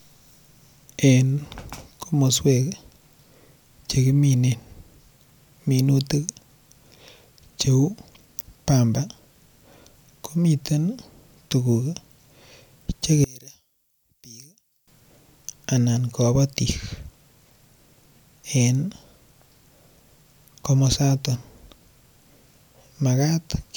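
From 13.24 to 14.88 s, one channel inverted is the likely cause: with one stereo side's polarity flipped, everything common to both channels cancels when summed to mono. The centred speech drops by about 25 dB, leaving a faint residue until normal level returns.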